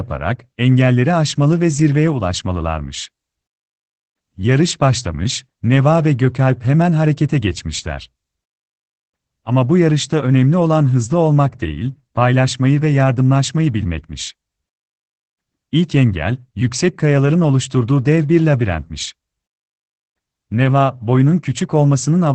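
From start to finish the speech sounds muffled, hoarse and slightly robotic, with nothing heard above about 8.8 kHz. That is Opus voice compression in its SILK mode at wideband. The linear-prediction coder models the voice and spends too few bits on the excitation, so detail turns rough. The damage is plainly audible and points to a rate near 12 kbps, with framing that fits 20 ms blocks.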